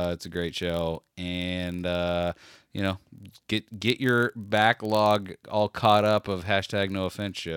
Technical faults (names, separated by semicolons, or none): block size mismatch (padded)